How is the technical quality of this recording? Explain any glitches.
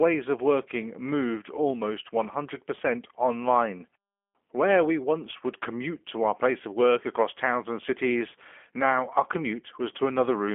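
Throughout the whole clip, the speech sounds thin, slightly rough and synthetic, with a buzzy, processed edge, the hallmark of the G.729 codec (here its lighter G.729A variant), and the damage is plainly audible. The sound sits in a narrow telephone band of about 250 Hz to 3.4 kHz. The codec does not carry the waveform itself. It rebuilds each short frame from a vocal-tract filter, a pitch predictor and a few pulses, which fits an 8 kbit/s stream and causes that artificial roughness.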